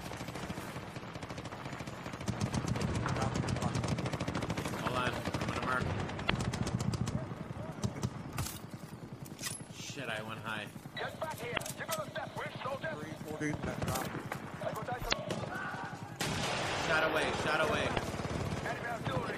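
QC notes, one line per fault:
6.26–6.30 s, 11.53–11.59 s, 15.09–15.14 s, 17.93–17.99 s: damaged data in a compressed stream. Four short chirps, squawks, clicks or holes, each about 45–55 ms, where corrupted bytes made the decoder misread frames and lose sync until it locked onto the next valid frame header.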